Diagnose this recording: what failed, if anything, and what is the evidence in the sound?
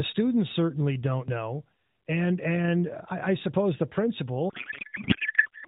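Codec payload misread, codec stage, from 4.50 s to the end: speech becomes garbled warble, which fits octet-aligned AMR frames being unpacked as bandwidth-efficient, scrambling their fields.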